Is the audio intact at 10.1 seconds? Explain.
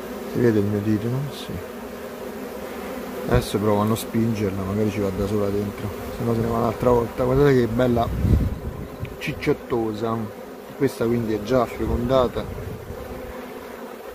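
Yes, the audio is intact at 10.1 seconds, with no dropout, click, distortion or other fault audible at that moment.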